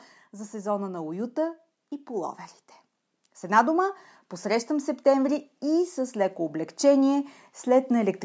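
From 4.67 s to 8.2 s, automatic gain rising: the gain control judged the input too quiet and lifted it gradually by about 6 dB. Voice and background swell together, and the waveform envelope widens steadily.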